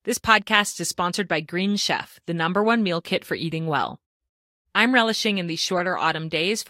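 At about 5.77 to 5.80 s there's a corrupt frame decoded: one compressed frame got damaged bits, and the decoder played it anyway. Its energy lands at the wrong frequencies, so you hear a brief chirpy blip, peaking somewhere around -15 dBFS.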